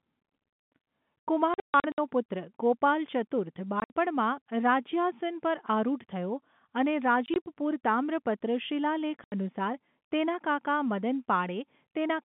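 Packet loss filled with silence at 1.54–1.98, 3.80–3.93, 7.26–7.46 and 9.24–9.32 s: lost packets play as silence, so the telephone-band speech drops out in hard-edged holes that fit 20 ms packets.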